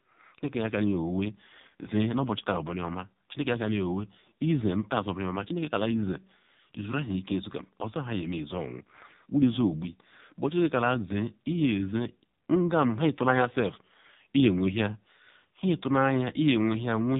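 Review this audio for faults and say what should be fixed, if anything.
AMR narrowband mobile codec damage runs throughout: nothing above 4 kHz, and heavily buzzy, synthetic speech, which fits the low 5.9 kbps AMR-NB mode. Prevent it by capturing or routing through a wideband path instead of a narrowband mobile call leg.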